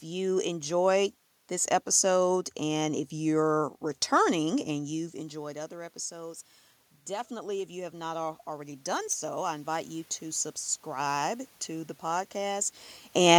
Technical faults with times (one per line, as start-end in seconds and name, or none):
4.70-6.51 automatic gain rising
7.08-12.73 automatic gain rising